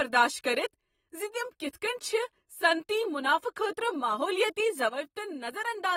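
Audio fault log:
throughout, AAC compression: the speech has a plainly audible coding texture, with nothing above 16.5 kHz and a dull, smeared sound, which fits low-bitrate AAC-LC at around 40 kbps. The codec has likely quantised each frame's spectrum hard against a hearing model and lowered its cut-off to save bits. On a spectrogram this shows as a flat ceiling at 16.5 kHz across the whole clip, with patchy, blocky energy below it where bands were thinned or filled.
4.89 to 5.96 s, one channel drops out: the level falls abruptly by about 6 dB at 4.89 s and stays down to the end, with the sound's character unchanged. This is the likely result of losing one of two stereo channels that carried the same material, so the mono sum keeps only half its amplitude. A waveform shows a clean step down in envelope height at 4.89 s, and the spectrogram darkens evenly across all frequencies from that point on.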